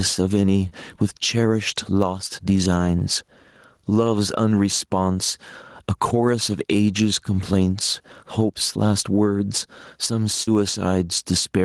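All the way through there's gain pumping: the level gets pulled down by about 10 dB whenever the speech gets loud, so everything sounds squashed and flat. That's likely a mic gain set way too hot with a fast limiter clamping down on every peak.

Then there's short concealed packet loss at 0.69 s and 2.99 s, about 20 ms missing each time, and at 10.43 s, about 40 ms missing. The receiver papered over each gap by stretching the last bit of sound before easing back in, so you get a quick smear or wobble.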